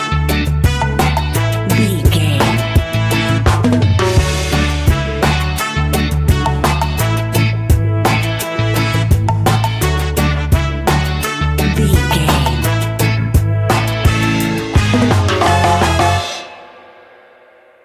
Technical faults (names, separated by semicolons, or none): none